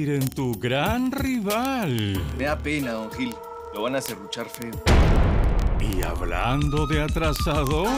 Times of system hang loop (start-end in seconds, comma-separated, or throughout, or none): none